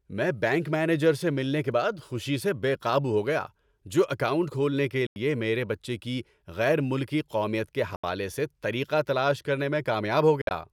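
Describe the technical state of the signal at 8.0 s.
Bluetooth dropout at 7.96–8.04 s, right after "قومیت کے": the speech cuts to silence for about 75 ms, likely from late packets being dropped, then resumes as if it had played on.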